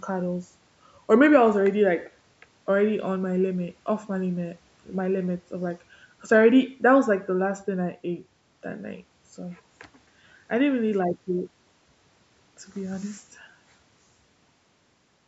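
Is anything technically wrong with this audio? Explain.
No, nothing technically wrong stood out on listening to this speech clip, which has simply been through ordinary call microphone processing.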